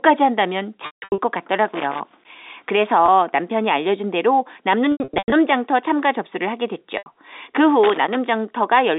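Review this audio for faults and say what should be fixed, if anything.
Packet loss with pitch repetition occurs at 0.86–1.18 s, 3.06–3.08 s, 4.92–5.32 s and 6.98–7.06 s. Packets went missing. The receiver looped the last pitch period to cover each gap. The short 20 ms loss sounds held and buzzy. The longer ones fade to silence. The run at 0.86 s loses about 280 ms, with a longest gap of 160 ms. The run at 4.92 s loses about 260 ms, with a longest gap of 100 ms. To prevent it, carry the call over a network with less loss, or add a jitter buffer and forward error correction.

Loose connector crackle occurs at 1.70–2.25 s and 7.84–8.15 s. A worn or dirty contact made and broke the circuit as it moved. This chopped the signal into irregular bursts of scratchy crackle. The call itself runs through G.711 telephone coding with a narrow band of about 250 Hz to 3.7 kHz. To prevent it, clean or replace the connector and secure the cable so it cannot shift.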